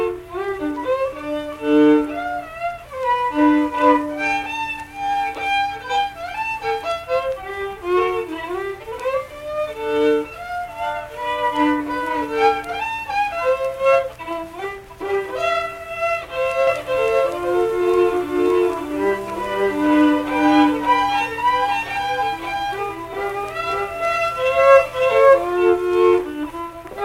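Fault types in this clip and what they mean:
Doubled audio track: from 16.67 s to 25.53 s every sound returns about half a second later as a second, full-band copy at roughly the same loudness as the first, so onsets land twice and the two layers smear into a confused, stuttering blend with no decay or room colour on the repeat, which switches on and off abruptly at those times. The likely cause is the same signal being captured again through a slower path or an edit leaving two copies out of step.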